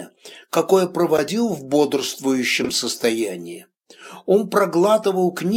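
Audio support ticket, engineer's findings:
Garbled flutter at 1.16–1.28 s. Frames out of order: two adjacent runs of decoded frames swapped, so the stretch plays back-half-first. Fits two runs of about four 23 ms frames, 92.9 ms a block. Same at 2.61–2.69 s, shorter: blocks of 46.4 ms, fitting two frames each. No time lost; timing resumes normally after each swap. Probable component: packet reordering ahead of the decoder.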